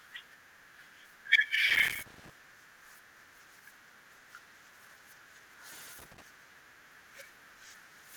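A speech recording broken by two irregular bursts of crackle and scratching, from 1.69 to 2.30 s and again from 5.99 to 6.22 s. This is loose connector crackle: a worn or dirty contact repeatedly making and breaking as it shifts, chopping the signal into rapid fragments.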